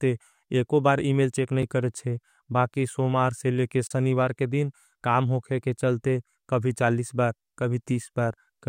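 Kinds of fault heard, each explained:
Block of digital silence: the playback path likely failed to deliver samples in time, leaving stretches of zeros in the speech. At 1.63 s, after "एको बार इमेल चेक", a 5 ms gap gives a sharp tick; at 3.87 to 3.91 s, before "के दिन काम होखे", a 35 ms hole cuts in abruptly.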